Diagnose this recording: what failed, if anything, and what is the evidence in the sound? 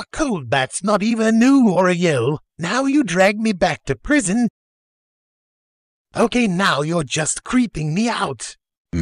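Hard clipping at the converter or a gain stage: peaks driven about 3 to 4 dB past full scale flatten and crackle from 0.94 to 2.08 s, 3.20 to 4.17 s and 6.21 to 6.25 s.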